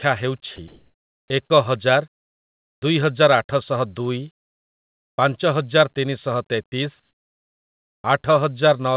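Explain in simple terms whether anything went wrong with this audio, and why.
Several things went wrong, all tied to a voice detector that decides when to send sound.

Sound dropped by the voice detector: at 0.56 s, a tiny piece of speech briefly vanishes under a flat hiss. The detector most likely mistook it for background. Unlike the pauses below, real speech is lost, not just quiet background.

Comfort noise in place of the background: from 0.68 to 1.3 s and from 2.14 to 2.82 s, the natural room sound between phrases is swapped for a smooth, featureless hiss. It is a little louder the first time and much quieter the second, likely because the sender stopped transmitting during silence and the receiver filled the gap with made-up noise.

Onset clipped by the voice detector: at 1.48 s, and from 2.75 to 2.82 s just before "ଦୁଇହଜାର ଆଠଶହ ଦୁଇ", sound starts abruptly without its soft beginning. 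The detector was likely slow to react. Only the start is cut, not a piece in the middle.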